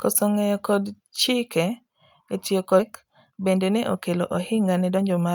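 Right after "e tiyo", at 2.79 to 2.81 s, there's a skip ahead: about a second of speech got dropped and the two sides butt together with no gap. Then from 3.03 to 5.32 s a jitter buffer speed-up kicks in, trimming tiny pitch-period slices to shed about a third of a second of backlog, so the speech runs 112% fast and sounds hurried at the same pitch.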